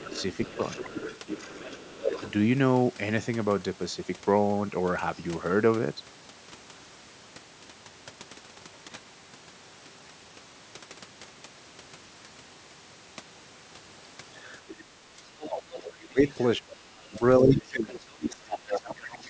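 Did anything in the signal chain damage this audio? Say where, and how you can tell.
Yes. Other side's voice leaking through, 0.0–2.31 s, 14.46–16.44 s and 18.71–18.8 s, about 15, 20 and 5 dB below the talker: likely residual loudspeaker echo the call's echo canceller missed.

Speech suppressed in double talk, 0.03–2.23 s and 15.19–19.29 s: the talker dips about 10 dB, then up to about 25 dB, likely as the canceller attenuates overlapping speech.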